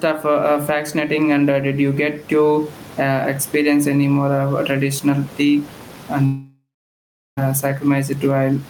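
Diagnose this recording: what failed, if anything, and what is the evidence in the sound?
Gain pumping runs through the whole clip, at the call-processing stage. The room noise sits about 29 dB below the speech. The level swing is around 10 dB. The likely cause is input gain set far too high, driving a fast limiter.

A long network dropout runs from 6.25 to 7.39 s. The last sound is stretched into a fading buzz or hiss. About 0.73 s of near silence follows. Speech then resumes with roughly 1.12 s lost. Nothing likely arrived from the network, so the receiver concealed the gap.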